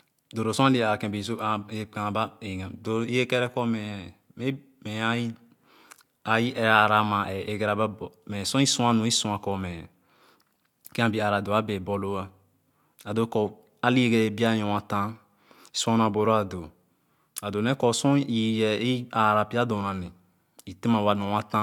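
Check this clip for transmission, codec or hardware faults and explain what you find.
No transmission, codec or hardware faults can be heard anywhere in this speech recording.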